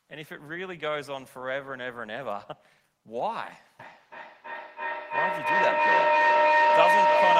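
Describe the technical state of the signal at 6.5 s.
At 6.5 s the signal is inside a feedback howl running from 3.8 s to the end: two devices in one room are on the same call, so a microphone picks up loudspeaker output in a loop, each pass gains level, and a tone around 1 kHz swells, with the loop repeating about every third of a second, to about 8 dB above the speech.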